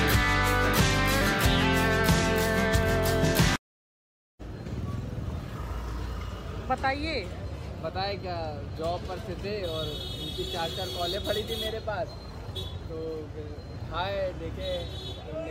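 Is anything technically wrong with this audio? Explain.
No, nothing stood out as technically wrong on listening.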